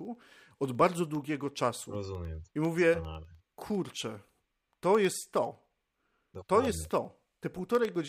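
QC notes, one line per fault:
0.05–7.95 s, periodic USB or driver dropouts: the USB bus or audio driver stalls every 0.1 s, swapping a fraction of a millisecond of speech for silence about seventy times, so a steady 10 Hz ticking rides on the speech and vanishes in pauses.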